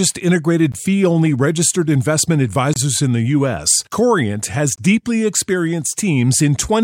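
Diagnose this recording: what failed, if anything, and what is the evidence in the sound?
Brief hard-edged silent holes interrupt the speech at 0.72 s, 2.73–2.76 s and 4.76–4.78 s, spaced two seconds apart: a gap between stream segments, where segment timestamps leave 16–26 ms that playback fills with silence.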